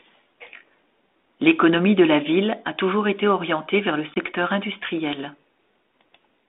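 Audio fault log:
4.14–4.17 s packet loss on an ADPCM call: after "été orientée vers le", about one lost packet leaves a hard-edged silent hole in the waveform. The decoder's predictor restarts out of step, so the speech returns slightly distorted before settling within some tens of milliseconds.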